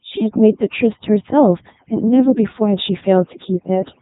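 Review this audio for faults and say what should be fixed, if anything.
Two things are wrong here, and both run for the whole clip.

First, overdone noise removal: the background drops and breaks up into little twinkling specks, and the quieter bits of speech get scooped out along with the noise. The reducer is switching off frequency bands that sit close to its noise estimate. Ease the reduction amount back, or skip it on material this noisy.

Second, the speech has been through a Codec 2 vocoder, and it's heavily damaged: robotic and buzzy, with nothing above about 3.8 kHz. The decoder rebuilds the voice from sine waves driven by pitch, voicing, energy and a spectral envelope, so the original waveform never survives. The sound points to Codec 2's top 3.2 kbit/s mode. Route the audio through a proper speech or music codec rather than a digital-radio vocoder.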